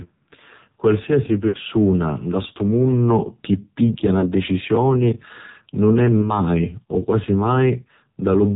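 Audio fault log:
throughout: AMR narrowband mobile codec. The speech is confined below 4 kHz and sounds heavily buzzy and synthetic, with the voice rebuilt from a coarse vocal-tract model and sparse pulses rather than carried as a waveform. The damage is severe enough to fit one of the lowest AMR-NB modes, around 5.9 kbps. A plain low-pass filter would dull the top end without this buzzy, artificial texture.
1.48–1.57 s, 4.20–4.33 s (after "chi pigghia"), 6.22–6.37 s (after "nun è"): lost AMR speech frames. At each point the decoder holds the last good pitch and vocal-tract settings at falling gain, so the sound smears briefly into a drawn-out warble or dip before recovering weak or rough. The first gap loses the most audio, about 60 ms, which fits about three consecutive lost frames. Unlike a hard dropout, the sound neither cuts to silence nor clicks.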